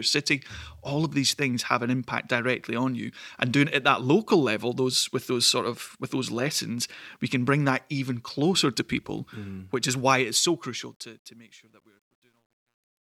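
From 10.36 s to the end at 13.08 s, truncation distortion on a fade roughens the fade-out. Kept to 11 bits without dither, the falling waveform turns into coarse steps, so the grit worsens as the level drops and is worst from 11.3 s, unlike steady hiss.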